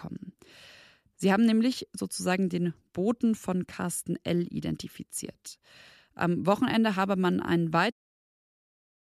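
Speech recording with no technical faults, the level easing down in a smooth editor's fade-out from around 8 s that ends at 7.93 s.

Hmm, that ordering contradicts itself; corrected:

Speech recording with no technical faults, the level easing down in a smooth editor's fade-out that finishes at 7.93 s.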